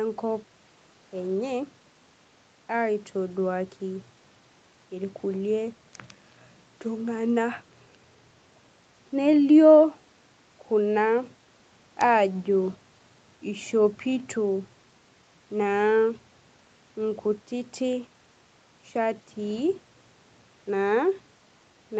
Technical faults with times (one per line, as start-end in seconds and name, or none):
none